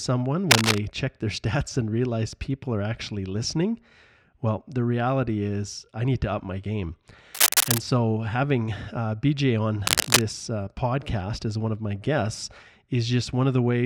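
Harsh scratching and rustling bursts, somewhat louder than the speech, cut in at 0.50–0.80 s before "check their", at 7.34–7.78 s between "to up my game" and "so having uh", and at 9.85–10.23 s before "uh podcast as one". This cable scratch noise likely comes from a worn cable or connector whose contact flickers when moved.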